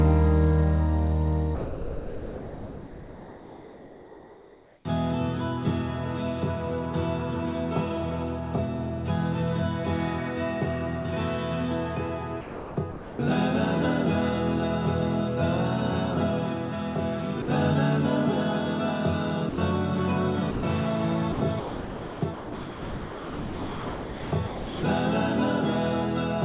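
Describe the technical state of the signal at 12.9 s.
Sound chopped by the voice detector, 12.41 to 13.19 s: about 0.63 s is replaced by comfort noise, so the sound turns choppy, most likely from voice-activity gating.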